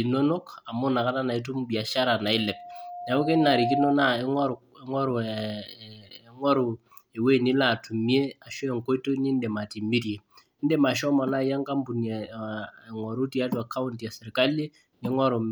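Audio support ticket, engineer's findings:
Loudspeaker feedback squeal, 2.34 to 3.96 s. Mic picking up its own PA speaker; loop gain above unity at 709 Hz. Single tone swells over roughly a second and a half, ending some 5 dB above the speech.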